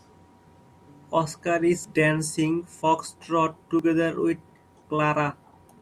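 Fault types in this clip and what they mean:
Audio missing between chunks: three skips, at 1.84, 3.79 and 4.77 s, each jumping over roughly 30 ms with both sides joined directly, likely from chunked processing losing a sliver at one-second boundaries; unlike a dropout, no silent gap is left.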